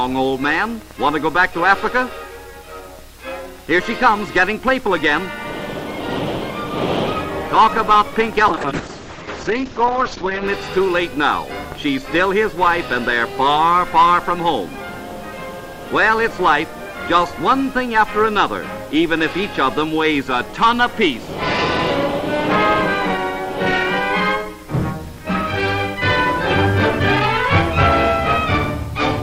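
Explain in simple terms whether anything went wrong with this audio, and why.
There is a call bitrate drop from 8.51 to 10.53 seconds. The connection suddenly looked too weak, so the encoder squeezed the audio into far less data for about two seconds. The sound turns rough and muffled, losing its top end above 8 kHz, then recovers.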